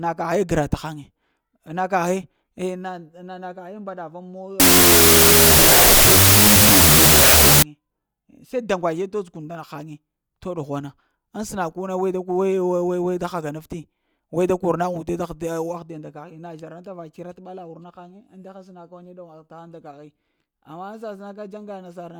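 From 4.60 to 7.63 s the speech collapses into harsh, loud noise. This is a wrong sample width fault. The sound points to 32-bit float data being read as 16-bit integers. Each true sample is split into two values. Only some of them carry the high bits of the real signal. The speech survives faintly under the noise. It also runs at half speed, so it drags and drops an octave in pitch.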